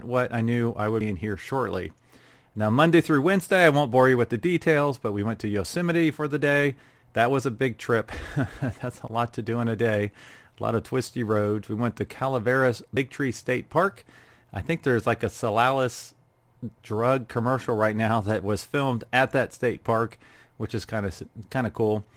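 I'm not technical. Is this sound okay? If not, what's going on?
Yes, nothing in this recording stood out as a problem when listening to it.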